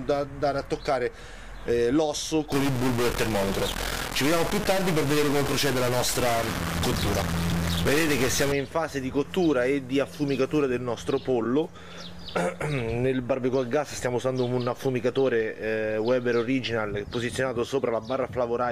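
From 2.52 s to 8.52 s the audio takes on a harsh, buzzy distortion consistent with a stuck bit, likely a data line or converter bit held at a fixed value. Samples whose true value differs in that bit are shifted by its weight, a step of about -25 dBFS, so the error follows the waveform's shape. Because that bit also flips with the sign of small values, quiet passages fill with an audible noise floor at roughly that level.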